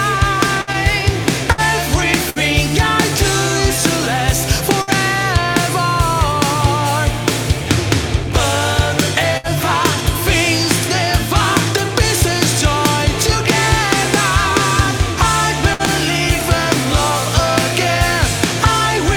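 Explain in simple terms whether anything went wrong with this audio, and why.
Burst of packet loss happens six times: at 0.61 to 0.70 s, 1.52 to 1.61 s, 2.30 to 2.39 s, 4.82 to 4.90 s, 9.37 to 9.47 s and 15.74 to 15.82 s. Each time, a chunk of audio never arrived in time. The player covered the hole by stretching the last sound for about 60 ms, letting it fade, which gives a brief buzz or hiss. Then the sound jumps ahead, skipping about 60 ms of audio.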